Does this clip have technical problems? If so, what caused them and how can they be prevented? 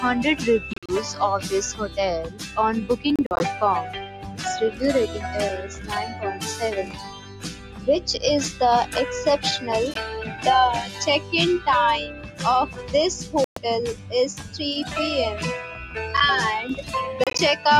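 Yes. A noise suppressor applied to music or sounds runs throughout. It treats steady tones and tails as noise. Held sound sinks while attacks pass, so the level pumps by around 10 dB. Turn speech noise suppression off for non-speech material.

Sound cut by the noise suppressor appears at 1.88–2.57, 4.04–4.40, 5.62–6.42, 6.84–7.87, 10.89–11.33, 12.09–14.57 and 15.75–15.96 s. Sustained parts drop by about 5 to 9 dB. Decays end early. Disabling the suppressor, or using a music mode, prevents this.

Bluetooth dropouts likely cause the sharp gaps at 0.73–0.92, 3.16–3.43, 9.94, 13.44–13.62 and 17.24–17.40 s. Short holes cluster within the 0.73, 3.16 and 17.24 s spans, up to about 46 ms each. Playback resumes as if it had continued. Keep the headphones close and reduce wireless interference to prevent this.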